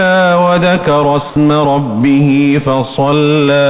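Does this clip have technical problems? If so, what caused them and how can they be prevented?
Yes. From 1.3 to 1.36 s, about 60 ms of the sound gives way to flat, steady hiss. This is likely sound dropped by the voice detector: the sender treated that stretch as background and stopped transmitting, and the receiver played comfort noise instead. Making the detector less aggressive, giving it a longer hangover, or disabling it would prevent this.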